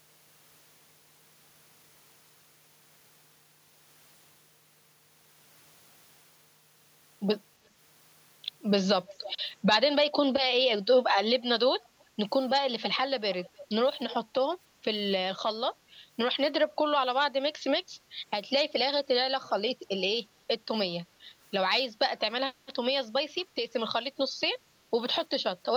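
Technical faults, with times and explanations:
9.08–9.35 s, 12.82–12.97 s, 14.09–14.15 s, 19.43–19.50 s: echo leak. Brief, quiet repeats of speech trail roughly 310–330 ms behind, fading to about 30 dB below the speech by the last. This is likely loudspeaker pickup that an echo canceller failed to remove.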